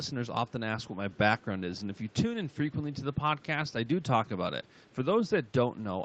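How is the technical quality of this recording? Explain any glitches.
The recording has one glitch, an echo leak. The sound is band-limited, with nothing above 8 kHz, which fits an Opus call path at around 32 kbps.

From 1.75 to 2.14 s, a delayed copy of the sound comes back, trailing it by about 256 ms. It sits far below the main signal, roughly 35 dB down. The likely cause is an echo leak. The far side played the call on a loudspeaker. Its echo canceller did not fully remove what its microphone picked up, so that residue was sent back.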